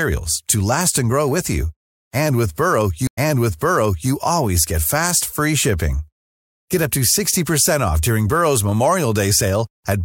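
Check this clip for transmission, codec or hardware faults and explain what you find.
One transmission fault is present in this speech. A stream reconnect at 3.07 to 4.11 s: the connection dropped, a new decoder restarted mid-stream, leaving 94 ms of silence, then speech resuming 0.94 s earlier, repeating material before "always get fast free".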